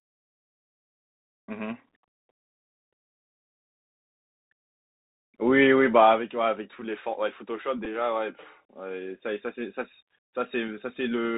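Throughout, the speech carries the Bluetooth CVSD headset codec. Nothing above 4 kHz survives. S sounds turn scratchy, and a granular hiss sits underneath, consistent with 64 kbps one-bit coding.

At 7.85 s, a Bluetooth headset packet repeated. About 7.5 ms of audio was replaced by stale data, which fits two lost 3.75 ms packets. It is heard as a brief buzz near 267 Hz.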